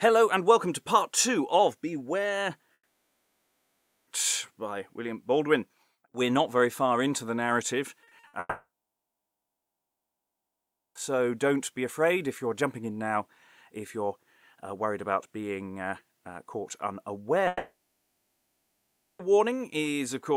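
A likely long network dropout cut off the incoming audio three times, at 2.73–4.09 s, 8.39–10.97 s and 17.47–19.21 s. Each time the last sound is stretched into a fading buzz, then gives way to silence lasting about 1.3 s, 2.3 s and 1.5 s, and the audio resumes with that stretch simply gone. Just before the second dropout, at 8.03–8.35 s, repeated packet loss punches four short holes into the stream, the longest 60 ms, and the patching covers half that span, so the sound turns choppy with pieces missing.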